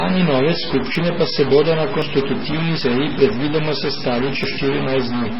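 Stuck bit, heard throughout the speech: a distortion rides on every syllable, and the pauses fill with a constant noise instead of going quiet. The likely cause is one data bit fixed at 0 or 1, throwing about half the sample values off by that bit's weight.

MP3 compression, also present for the whole clip: the sound is heavily damaged, watery and swirling, with smeared consonant attacks. This is likely an MP3 encoder starved of bits, which fits a very low rate around 16 kbps, so it cuts the treble and toggles weak frequency lines.

Dropped buffer (overrun) at 0.95, 2.02, 2.81 and 4.44 s: each is a point where the speech jumps forward with no silence. Roughly 20 ms goes missing at three of them and about 70 ms at 2.81 s. The likely cause is samples overwritten before the program collected them, leaving the surrounding audio spliced directly together.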